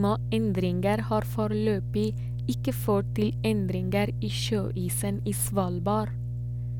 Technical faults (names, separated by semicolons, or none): mains hum